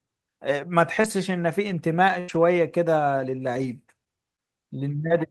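A speech clip with scattered short gaps from 0.59 to 5.12 s: about five lost packets patched by repeating sound, showing as brief smeared or duplicated patches in the spectrogram.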